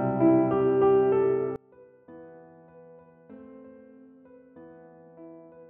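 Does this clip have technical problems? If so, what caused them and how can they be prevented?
Yes: from 1.56 s onward, one channel inverted is the likely cause, so the shared content cancels in mono and the sound falls about 27 dB to a faint residue. Checking polarity on both channels and monitoring a mono fold-down before delivery prevents it.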